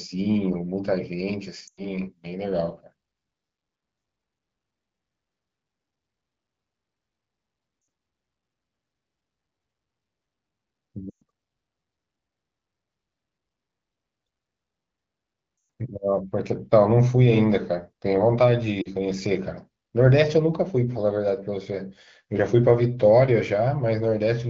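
Lost AMR speech frames hit at 1.67–1.82 s, 7.81–7.87 s, 11.10–11.24 s, 15.57–15.69 s and 18.82–18.89 s, with gaps of 40 to 120 ms. The AMR wideband decoder repeats its last good settings with falling gain, so the speech quickly fades before returning weak or rough.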